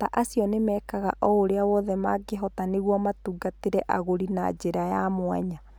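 A steady low tone sits under the speech from start to finish, a dull drone at 50 Hz with some low harmonics above it, about 25 dB below the speech. This is mains hum: the power line's frequency has leaked into the signal path, through a ground loop between connected pieces of equipment or through magnetic pickup from a nearby transformer, and it was recorded along with the speech.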